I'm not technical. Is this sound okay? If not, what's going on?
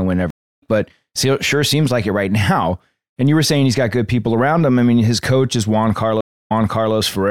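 No, there are two stream reconnects in this speech. The connection drops, goes quiet for about 0.3 s, then picks up somewhere else: at 0.30–0.62 s it skips ahead roughly 0.4 s, and at 6.21–6.95 s it jumps back, repeating 0.44 s.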